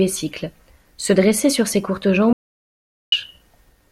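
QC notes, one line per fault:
2.33–3.12 s, audio dropout to silence: just after "dressait sur ses courtes" the speech cuts out completely for about 0.79 s, dead silence with no room tone, then returns mid-flow. Likely the input dropped, from a device disconnect or stray mute, while the recorder kept writing silence.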